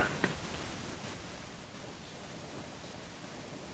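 Speech, with automatic gain falling from 0.05 to 1.71 s: the control judged the input too loud or its background too strong and eased its gain down by about 9 dB, so voice and background sink together. On the waveform the envelope tapers steadily, and a spectrogram shows the whole band dimming at once, below the call microphone processing's 8 kHz ceiling.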